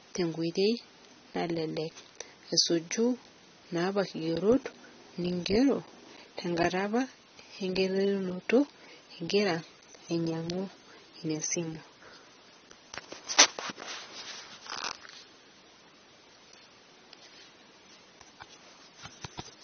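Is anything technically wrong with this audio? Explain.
Yes. Throughout the speech, nothing sits above 6.3 kHz, and sibilants sound dull, smeared and fizzy. This is likely AAC compression at a bitrate near 24 kbps, which discarded the upper bands.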